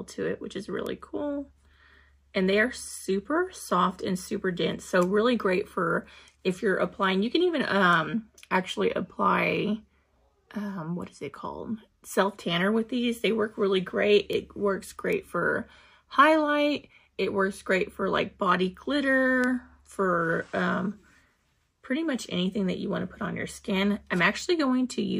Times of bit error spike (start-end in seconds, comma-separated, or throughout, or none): 0.86, 14.33, 15.13, 19.44